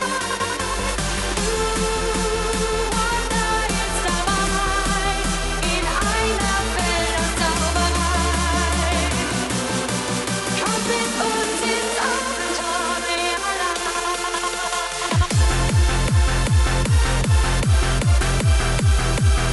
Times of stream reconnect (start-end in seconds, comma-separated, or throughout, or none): none